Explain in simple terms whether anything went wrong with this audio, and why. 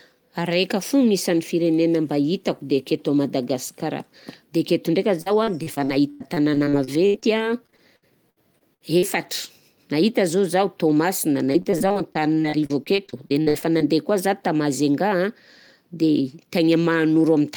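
Yes. The speech turns choppy and robotic from 5.21 to 9.04 s, and again from 11.52 to 13.82 s. In each stretch, about twenty brief holes break up the sound, the longest lasting about a tenth of a second in the first stretch and about 0.06 s in the second. This is repeated packet loss (robotic sound): pieces of the audio arrived late or never arrived, and each hole was covered by stretching out the sound just before it. Those patched-over bits, about a fifth of each stretch, give it the stuttering quality.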